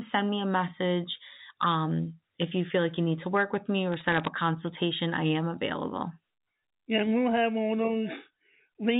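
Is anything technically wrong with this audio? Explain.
Yes. From 3.92 to 4.28 s, between "to work with me" and "a consultation I am", a burst of sharp ticks and crackle sits over the speech, which itself stays intact underneath. These are bit errors on a digital phone line. On this 64 kbps G.711 A-law telephone channel, each flipped bit corrupts a single 8-bit sample, and hits on the upper bits, or on the sign of a loud sample, throw that sample far off, making a click. An error rate of around half a percent over this stretch turns those clicks into crackle.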